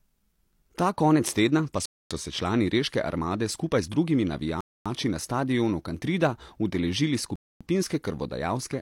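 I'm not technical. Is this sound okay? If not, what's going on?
No. The speech cuts out abruptly three times, at 1.86 to 2.11 s, 4.61 to 4.86 s (just before "na stadionu") and 7.36 to 7.61 s. This is a gap between chunks: the audio plays in 2.5-second pieces, with a quarter-second of silence inserted at each join.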